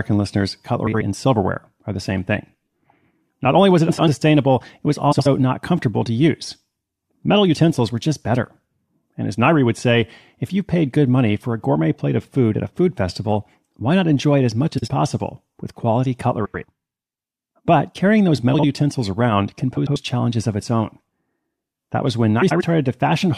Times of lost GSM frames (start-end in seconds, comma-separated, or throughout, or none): none